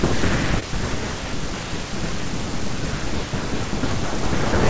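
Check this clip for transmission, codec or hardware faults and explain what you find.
One transmission fault appears: short concealed packet loss at 0.60–0.64 s, where about 20 ms of speech went missing and the receiver synthesized replacement audio, leaving a brief smear or wobble. The call path's band stops at 8 kHz, consistent with a G.722 wideband codec.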